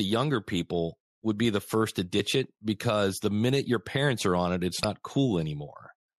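At 4.83 s, damaged data in a compressed stream produces a brief glitch. Corrupted frames confuse the decoder, which loses sync and skips ahead to the next frame.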